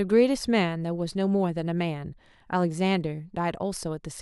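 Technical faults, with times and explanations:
Nothing technical stands out here; there's no fault to flag anywhere in the clip.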